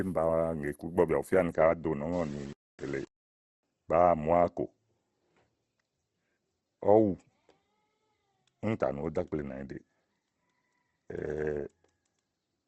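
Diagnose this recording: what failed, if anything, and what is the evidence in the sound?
Codec stage: the whole speech clip is grainy and rough, with nothing above 12 kHz. That points to Opus compression, likely at a low rate around 16 kbps in its music mode. Bands are filled with folded or noisy content rather than left as holes, so it's rough rather than swirly.

Sample-format conversion: from 2.13 to 3.63 s the speech turns gritty, with distortion that follows the sound and sits only about 30 dB below it. That's likely low bit depth without dither, roughly a 7-bit word rounded to the nearest step, so the error tracks the signal instead of staying a steady hiss.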